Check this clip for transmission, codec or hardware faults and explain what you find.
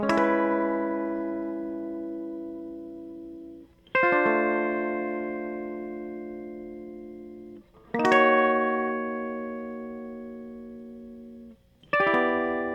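One fault stands out. From 0.0 to 2.0 s, an adaptive stream starting at a low bitrate leaves the music dull and artefact-heavy, fitting 32 kbit/s Opus, until it jumps seamlessly to cleaner 64 kbit/s quality.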